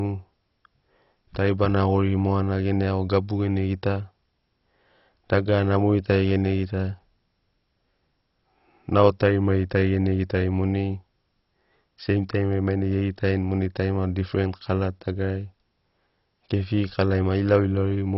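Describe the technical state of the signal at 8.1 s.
At 8.1 s, as throughout, the speech is dull and gurgly with nothing above 5.6 kHz: likely MP2 compression starving its upper sub-bands, which fits 32 kbps.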